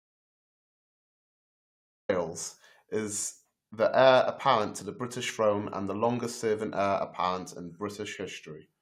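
Speech that opens in an audio dropout to silence: from the start until 2.09 s there is silence with no room tone, a flat line on the waveform and an empty black band on the spectrogram, before speech begins abruptly, likely from input lost while recording continued.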